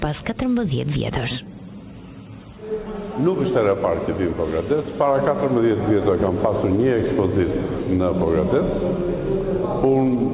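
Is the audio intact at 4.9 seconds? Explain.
Yes, at 4.9 seconds the audio is intact, passing through the call path with its normal narrowband character and no dropout, glitch or other fault at that moment.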